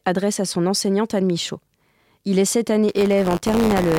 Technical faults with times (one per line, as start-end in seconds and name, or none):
2.88-3.99 buffer tearing